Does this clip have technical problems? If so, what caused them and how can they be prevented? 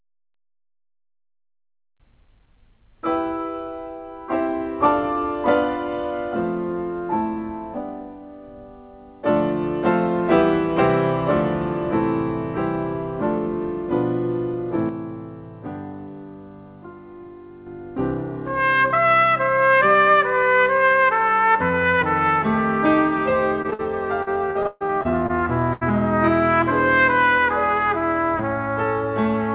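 Yes. The level drops by about 6 dB at 14.89 s and returns at 17.66 s, background included, with no fade. This sudden gain jump is likely an unramped gain change. Apply gain changes with a short ramp over several milliseconds.

Brief smears at 23.62 s and 23.70 s are short concealed packet losses. About 20 ms each went missing and was bridged by extending the preceding sound. A burst of packet loss follows at 23.73 s and another at 25.73 s. In each, a held buzz or fading hiss stands in for roughly 60 ms and 80 ms of lost audio, and playback resumes further on. From 24.23 to 25.31 s the sound turns choppy and robotic. This is repeated packet loss: seven gaps, the longest 137 ms, with about 300 ms missing in total. A larger jitter buffer, forward error correction and a more stable network path would reduce all three kinds of loss.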